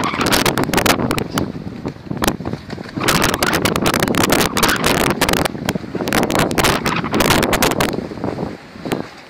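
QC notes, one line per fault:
Throughout: integer overflow. Loud peaks break into violent, sharp cracks, harsher than clipping. The level runs about 1 dB too hot, so a small share of samples exceed the integer maximum and wrap to the opposite sign instead of being limited, flipping across the full range.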